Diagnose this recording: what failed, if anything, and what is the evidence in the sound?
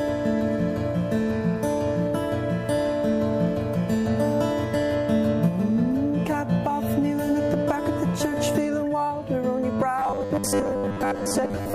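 The failure sits at the driver or buffer stage. From 9.99 s to the end at 11.75 s, the sound turns into a rigid, metallic buzz at a fixed pitch of 100 Hz while still loosely tracking the original contour. This robotic sound from repeated short buffers is likely caused by starved audio delivery, with the software looping the last 10 ms block to fill gaps. Roughly two-thirds or more of that span is repeated material rather than fresh audio.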